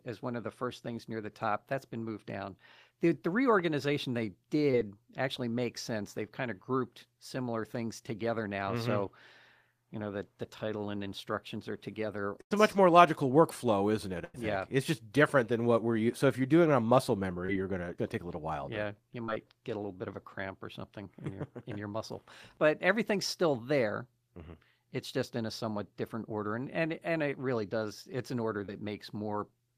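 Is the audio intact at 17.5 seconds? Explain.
No. A short concealed packet loss runs from 17.46 to 17.50 s: about 20 ms never arrived, and the decoder extrapolated the preceding speech, leaving a brief smear.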